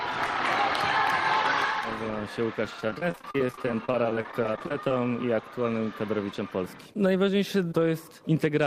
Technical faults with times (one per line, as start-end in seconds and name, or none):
2.80-4.91 repeated packet loss (robotic sound)